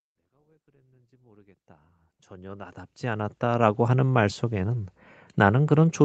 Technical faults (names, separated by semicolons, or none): none